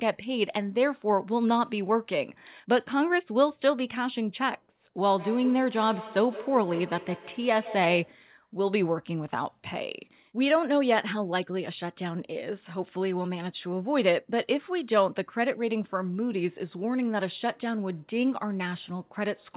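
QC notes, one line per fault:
5.01–8.25 s, feedback echo between two devices. Each word of the speech returns at a fixed interval of roughly 150 ms, thinner and more ringing each time. The loudest repeat sits about 14 dB below the speech. A second device on the same call is playing this sound aloud, and the first device's microphone picks it up again. Neither echo canceller removes it, since each cancels only its own playback. The repeats stay within the call's 4 kHz band.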